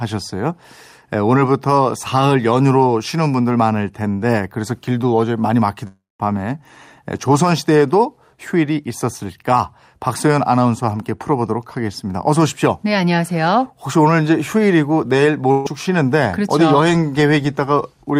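A long network dropout runs from 5.87 to 6.21 s. For about a third of a second the speech simply stops arriving, and the playback stretches the last sound into a fading buzz or hiss before settling into roughly 180 ms of silence. When the speech returns, it has jumped ahead by about 320 ms. That missing stretch is never recovered. The likely cause is a stall in the network path that starved the receiver long enough for its concealment to give out.

A burst of packet loss follows at 15.51 to 15.67 s. About 140 ms of speech fails to arrive in time, and the receiver covers it by repeating the last sound and letting it decay. It is heard as a brief held buzz or hiss that softens across roughly 130 ms, with no silent gap. The speech then picks up further along, with the lost fragment skipped.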